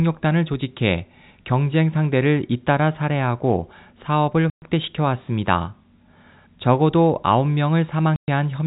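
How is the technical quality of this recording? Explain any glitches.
The speech comes through a narrow telephone band, with nothing above 4 kHz, as you'd expect from G.711 coding, but it has two dropouts. These are packet loss filled with silence, at 4.5 to 4.62 s and again at 8.16 to 8.28 s. Each time, about 120 ms of audio never arrived, which fits four 30 ms packets, and the receiver played silence in their place. You hear a hard-edged hole.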